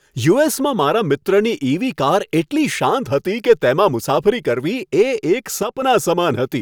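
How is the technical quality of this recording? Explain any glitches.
There is one glitch, near the end of the speech. From 5.63 to 5.82 s the level drops abruptly by about 6 dB for roughly 0.19 s, then snaps back. The likely cause is one channel dropping out: with one stereo side gone, the mono sum loses half of the shared signal.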